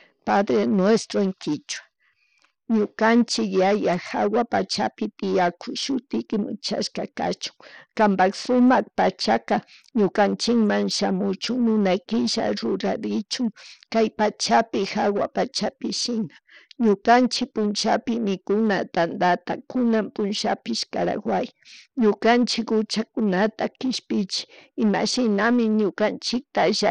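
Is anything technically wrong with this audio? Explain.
Yes. Throughout the speech, the audio was likely squeezed through Bluetooth SBC compression with a small bit pool, which fits a low rate around 80 kbps. Starved upper sub-bands leave nothing above 10.1 kHz, and coarse quantisation adds plainly audible grit and aliasing.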